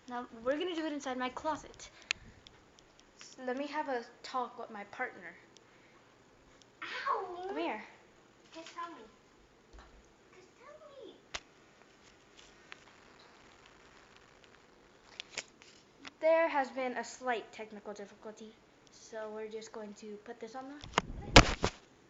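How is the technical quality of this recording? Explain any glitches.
Nothing stood out on listening that would count as a glitch or a technical problem in this recording.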